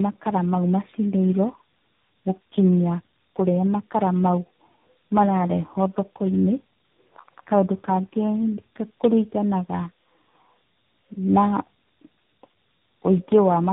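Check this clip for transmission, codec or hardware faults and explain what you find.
One fault runs through the whole clip: tandem speech coding. The speech was decoded and re-encoded across three speech codecs in a row, each roughening the last, so it's muffled, warbly and gritty, with nothing above 3.8 kHz.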